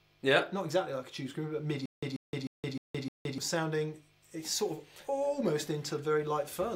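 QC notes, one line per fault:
1.86–3.38 s, stutter with silent gaps: the player or stream likely stalled and replayed its last fragment at each retry, so a 138 ms burst returns five times with 169 ms of digital silence between, a steady 307 ms cycle, and the audio due there is lost.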